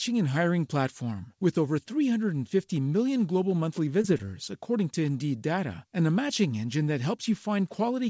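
At 4.02 to 4.06 s, just after "million global monthly", there is a short concealed packet loss. About 20 ms of audio never arrived in time, and the receiver extended the preceding sound to cover it before blending back. It is heard as a brief smear.

At 4.18 to 4.25 s, still following "million global monthly", a short stall from a late packet occurs. The jitter buffer emptied, so the last sound was held about 10 ms too long before resuming where it left off. It gives a faint buzz, and the waveform shows a short repeated stretch of cycles. Across the clip, the spectrogram stops cleanly at 8 kHz, consistent with a G.722 call path.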